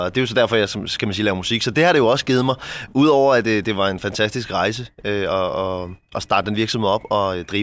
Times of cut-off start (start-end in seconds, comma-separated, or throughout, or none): none